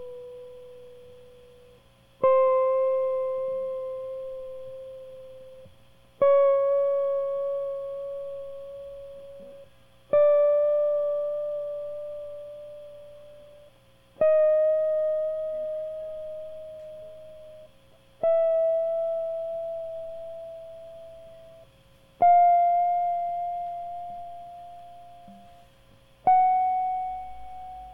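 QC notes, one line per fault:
No fault was found in this music clip. There is nothing further to log.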